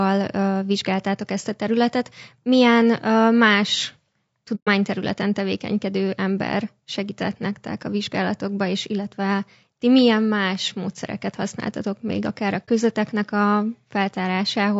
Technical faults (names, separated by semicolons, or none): low-delay AAC compression; AAC frame loss with muting